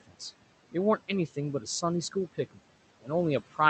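Right from the start at 0.07 s, the noise suppressor clips the speech. It mistakes the opening sound for background noise and pulls it down by up to about 15 dB until 0.21 s, so roughly a tenth of a second comes out swallowed and faint.

Across the whole clip you can also hear noise suppressor artifacts. The room noise, sitting about 17 dB under the speech, gets pushed down by about 17 dB in the gaps and creeps back up under the speech.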